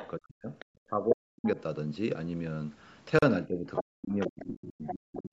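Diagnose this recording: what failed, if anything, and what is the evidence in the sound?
Other side's voice leaking through shows up in the call processing as short scraps at 0.0–0.08, 0.59–0.65, 3.75–3.82, 4.21–4.47 and 4.87–4.94 s. They sit roughly 5 to 20 dB under the talker and are loudest near 3.75 s. That's likely residual echo the echo canceller didn't strip from the mic.

Speech suppressed in double talk: the talker's level ducks hard, around 40 dB at its deepest, over 0.16–0.5 s, 0.66–1.58 s and from 3.46 s to the end. That's likely the same echo canceller failing to separate the near talker from loudspeaker echo, so it turns both down together.

Bluetooth stall at the playback end: the sound drops to silence for 37 ms at 3.19–3.23 s, then resumes. Likely interference delayed packets, the headphones' buffer ran dry, and playback waited for the resent packets to arrive.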